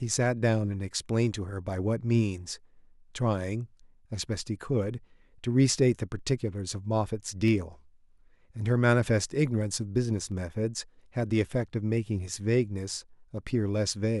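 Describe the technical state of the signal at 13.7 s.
At 13.69 s a single sharp click, likely from dropped samples: a fraction of a millisecond vanishes, the waveform steps abruptly, and a thin vertical line crosses the spectrogram.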